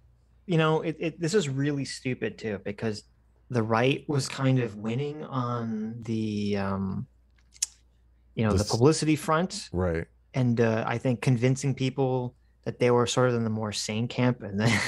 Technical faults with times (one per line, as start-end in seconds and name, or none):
4.11-6.02 channel delay (comb filtering)